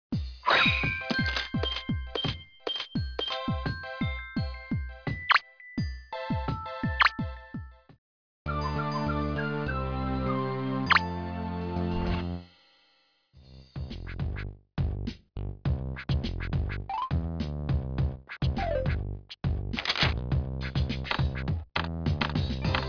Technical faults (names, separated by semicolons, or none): none